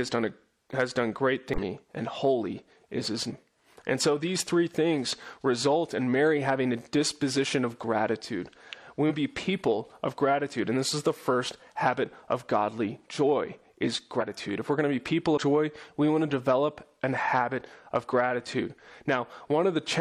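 Compressed frames are skipped at 1.54, 3.25, 9.06, 14.17 and 15.28 s. Missing or rejected frames make the sound jump ahead between about a tenth and a third of a second.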